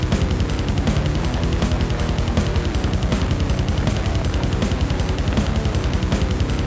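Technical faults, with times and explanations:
Nothing here counts as a fault; the sound has come over a call link whose codec stops everything above 8 kHz, which fits a wideband G.722 path, and that top-end ceiling is just how such a link carries audio.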